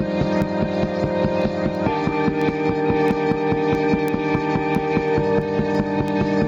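Gain pumping runs through the whole of this recording of everyday sounds: the gain swings by about 5 dB as louder sounds arrive, so loud and soft moments sit unnaturally close in level and the result feels squashed and breathing. The likely cause is an input gain set far too high for the microphone, with a fast limiter or compressor pulling the level down on every peak and releasing it in between. Word clock ticks start at 0.42 s and continue to the end, a steady train of sharp clicks arriving roughly every 0.3 s, some louder than others. They point to a digital link read by a device running on its own clock rather than locked to the sender's, with the two drifting apart by something around 70 ppm. Each time the clocks slip past one another, a single sample is dropped or repeated, and that tiny discontinuity is what clicks.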